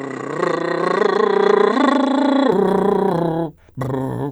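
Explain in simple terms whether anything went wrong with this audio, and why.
Input switched to a poorer device, from the start to 2.52 s: the music sounds dull, with nothing above 8.8 kHz and a faint extra hiss, then brightens with no gap or jump in loudness. Recording likely began on a narrower-band microphone before moving to the proper one.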